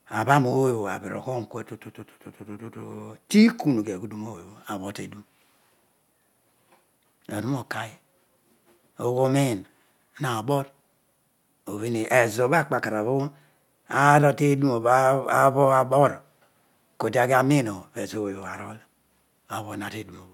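No technical faults can be heard anywhere here.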